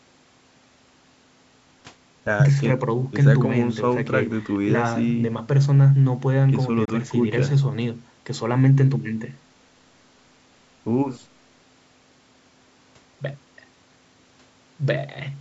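A speech clip with a brief hole from 6.85 to 6.90 s, a likely Bluetooth dropout where two late packets were discarded and about 28 ms of audio never played. The waveform drops to a flat line, and the spectrogram shows a narrow blank column through the band, which tops out at 8 kHz.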